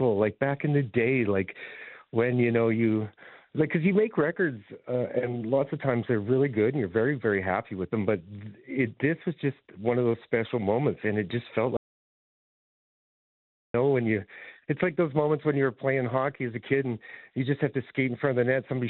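At 11.77 s the sound cuts off mid-flow and the track drops to silence until 13.74 s, so you lose just under 2 seconds (about 1.97 s) of audio. It's a classic audio dropout to silence: no room tone or noise floor in the gap. The likely cause is the input going away for a moment, through a loose connection, a dropped link or an accidental mute, while the recorder kept writing.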